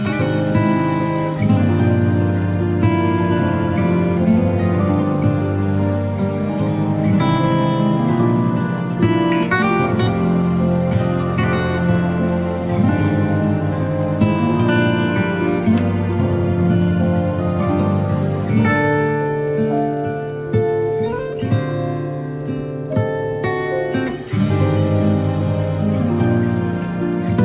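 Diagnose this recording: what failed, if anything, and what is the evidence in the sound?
Nothing stood out on listening beyond the narrow, telephone-like band of the call path, which, as expected for G.711 A-law, carries nothing above 4 kHz.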